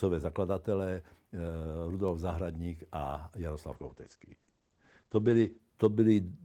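At 2.08 s a bit error spike occurs: a flipped bit in memory or on a digital link throws a few consecutive samples far off by a power of two before they snap back. It is heard as one sharp, broadband tick, unrelated to the speech around it.

From 3.76 s to 5.65 s there is a call bitrate drop. The bandwidth estimate fell and the encoder was starved of bits, consistent with a fall from about 32 kbps to around 11 kbps held for roughly 1.8 s. The top end is cut from 20 kHz to 8 kHz, so the speech turns muffled and coarsely coded until the rate recovers.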